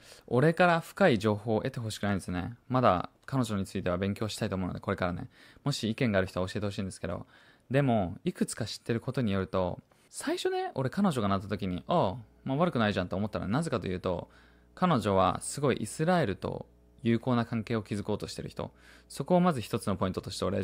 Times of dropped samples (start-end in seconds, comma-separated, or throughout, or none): none